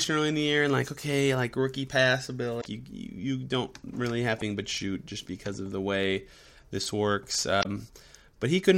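At 2.58 s, right after "okay like rookie pass", the speech breaks up for about 0.09 s. This is damaged data in a compressed stream. Corrupted bytes make the decoder misread the frames, lose sync and hunt for the next valid frame header. The same glitch returns from 4.35 to 4.42 s, between "you you don't really" and "but shoot just because", and again from 7.59 to 7.66 s. Each one is a brief break of the same kind.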